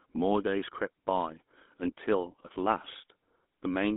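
From start to finish the speech passes through a GSM full-rate codec, which points to the 13 kbps first-generation mobile coder. The sound is confined to roughly 200 Hz to 3.6 kHz and carries an obvious buzzy, gravelly roughness from its regular-pulse excitation, unlike the watery, swirling smear of low-bitrate transform codecs.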